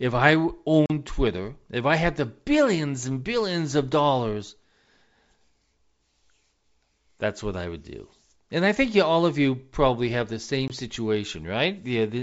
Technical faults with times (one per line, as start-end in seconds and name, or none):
0.86-0.90 packet loss on an ADPCM call
10.68-10.72 packet loss on an ADPCM call